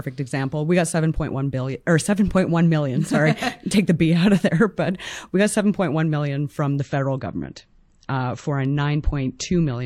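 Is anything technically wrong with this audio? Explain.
Yes. From 6.78 s to the end, the stream switches to a lower bitrate. A slowed connection made the player switch versions. The switch is sudden, with no gap. Codec artefacts rise and nothing remains above 8 kHz, which fits MP3 dropping from 128 to 32 kbit/s.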